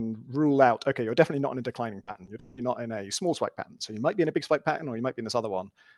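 From 2.03 to 2.59 s, the call stream suffered repeated packet loss: four gaps, the longest 180 ms, each filled by extending the preceding sound. With half that stretch patched this way, the speech turns choppy and robotic, with fragments audibly missing.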